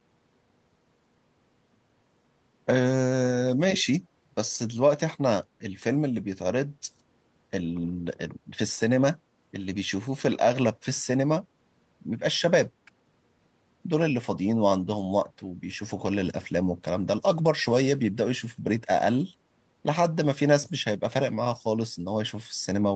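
From 3.78 to 3.84 s, a faint copy of the speech returns about 130 ms late, likely an echo leak from a loudspeaker-side echo canceller missing residue.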